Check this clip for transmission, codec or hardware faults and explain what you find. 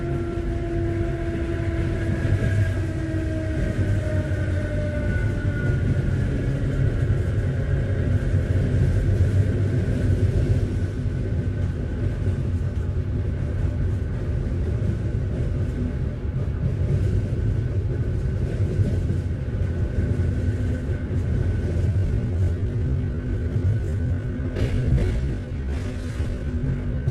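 One fault is present: a time-stretched section running from 21.85 s to the end of the clip at 27.11 s. Here the audio plays at about 0.58 times its original pace while pitch holds steady, so the slowdown arrives as a sudden change rather than a drift. The likely cause is processing that lengthened this stretch by repeating short segments of the waveform to fill time without lowering pitch. The slowed audio drags through to the end.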